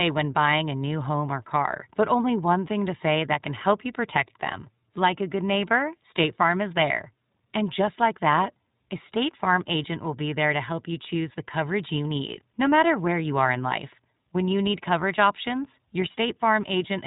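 From start to finish the speech carries iLBC codec damage. Nothing passes above about 3.8 kHz, so sibilants and breath lose their edge, and the voiced sound has a plainly audible rough, slightly synthetic grain from coding each short block of excitation on its own, which fits 20 ms frames at the 15.2 kbps mode. Unlike a plain band-limit or G.711 telephone coding, which stays clean within the band, this roughness sits inside the remaining band too.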